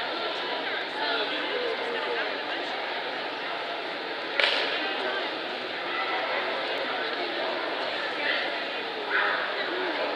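At 0.82 s and again at 6.78 s, an overlap between stream segments cuts roughly 10 ms of sound, so the waveform jumps abruptly. Each cut is heard as a tiny skip and shows on a spectrogram as a thin vertical broadband line. The six-second spacing fits 6-second segments.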